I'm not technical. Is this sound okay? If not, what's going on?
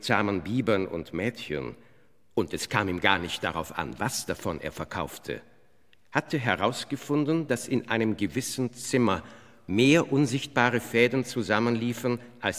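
Yes, nothing stood out as a problem when listening to this sound.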